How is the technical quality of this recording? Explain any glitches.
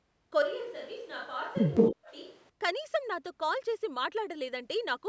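The recording has three faults clustered in its first two and a half seconds, all typical of call audio. The band stops at 8 kHz, as call microphone processing does.

From 0.42 to 2.49 s, the close microphone likely dropped out in a switch to a distant microphone. The speech turns roomy and hollow, about 5 dB quieter, with room noise roughly 25 dB below it.

From 1.75 to 1.95 s, an echo leak, likely from an echo canceller missing loudspeaker pickup, sends a 177 ms delayed copy of the voice back, somewhat louder than the speech.

From 1.91 to 2.13 s, speech is suppressed in double talk. The canceller likely mistook overlapping talk for echo and dipped the voice sharply, by roughly 35 dB, for about a fifth of a second.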